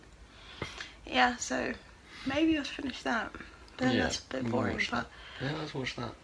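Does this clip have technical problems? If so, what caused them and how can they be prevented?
No, there are no dropouts, distortion, glitches or other technical faults audible anywhere in this recording, so nothing here calls for a fix or a preventive measure.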